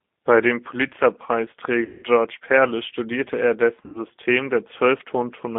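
G.729 codec damage runs through the whole clip. The speech is confined to a 200 Hz to 3.5 kHz band and rebuilt at 8 kbit/s from a vocal tract model and a few pulses per frame, leaving it intelligible but plainly rough and synthetic.

VoIP packet loss concealed by the speech codec strikes at 1.85 to 2.05 s and again at 3.86 to 4.01 s, covering 180 ms and 80 ms of missing audio. The decoder stretches its last pitch and filter into a fading buzzy tone or coloured noise, and the speech stays weak briefly afterwards.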